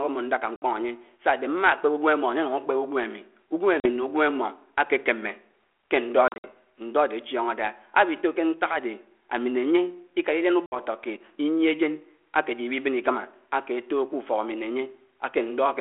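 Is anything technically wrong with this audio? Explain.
Yes. Packet loss on an ADPCM call: at 0.56, 3.8, 6.28 to 6.48 (several scattered gaps) and 10.66 s the speech drops into abrupt silent holes of about 40 to 60 ms. It then resumes with brief distortion, because the decoder's prediction and step size have lost step with the sender's.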